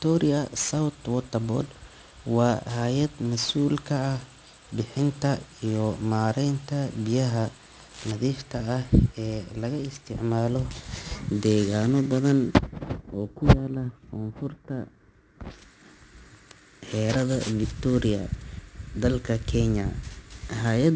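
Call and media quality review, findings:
Aliasing throughout: gritty, metallic sibilants, energy running hard to an 8 kHz edge, fitting unfiltered resampling to 16 kHz. Unlike clean band-limiting, folded components land at unrelated pitches, roughly 20 dB down.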